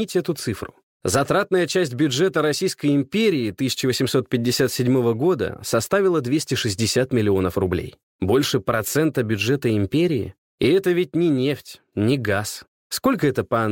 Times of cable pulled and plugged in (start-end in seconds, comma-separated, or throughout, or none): none